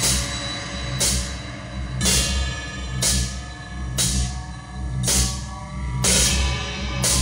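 No technical faults are audible anywhere in this audio.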